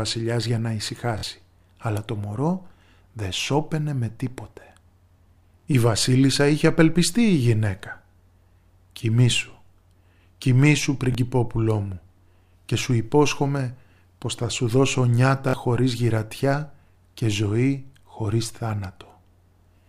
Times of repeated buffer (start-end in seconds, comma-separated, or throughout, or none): 1.18-1.23, 5.60-5.64, 11.12-11.15, 15.49-15.53